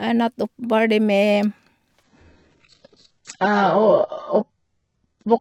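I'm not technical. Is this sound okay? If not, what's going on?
No, not quite. From about 2.03 s to the end, the speech suddenly gets duller and fuzzy or artificial. That's an adaptive stream dropping to a lower bitrate: the connection slowed, so the player quietly switched to a much smaller, lower-quality version of the audio. There's no gap or pause at the switch, just an abrupt loss of crispness, with nothing above 8 kHz, so the bright, airy part of the sound is gone.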